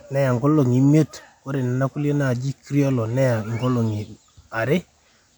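No technical faults can be heard anywhere in the speech. Nothing in the recording calls for a time mark or a closer look.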